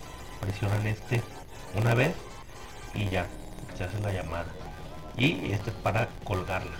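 Throughout, a block size mismatch (padded) inserts a brief run of zeros into every block, which fits short writes padded out to 512-sample reads. It buzzes at 86.1 Hz and runs at 0.938 speed with pitch near normal. The waveform shows regular flat gaps, and the spectrogram shows thin vertical stripes.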